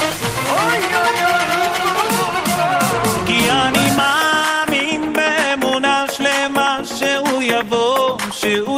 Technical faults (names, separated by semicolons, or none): none